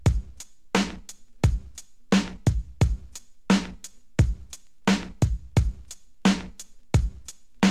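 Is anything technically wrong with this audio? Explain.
No, nothing stood out as technically wrong when listening to this audio.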